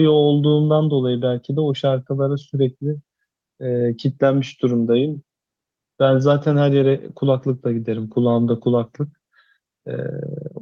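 No technical faults can be heard anywhere in the speech.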